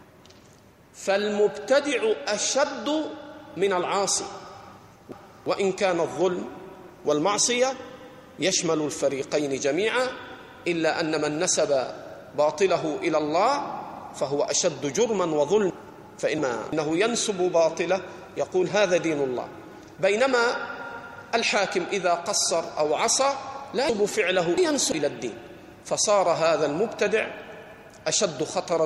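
Chunks out of order: blocks of about 341 ms were written late, one block late at 4.78 to 5.46 s and two blocks late at 15.70 to 16.73 s and 23.89 to 24.92 s. Each spot plays as a jumbled, reshuffled moment with hard joins.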